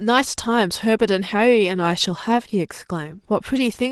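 Throughout, the speech sounds hoarse, grainy and slightly robotic. This is Opus voice compression in hybrid mode, which coarsely codes the excitation at a bitrate that sounds like about 16 kbps.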